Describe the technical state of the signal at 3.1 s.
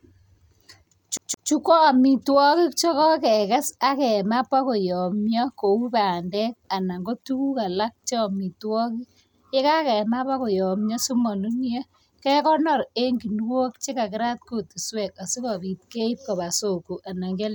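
At 3.1 s the speech signal is intact, with no fault present at that moment.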